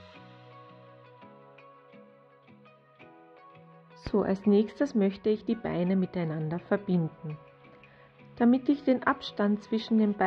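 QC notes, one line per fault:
No faults detected.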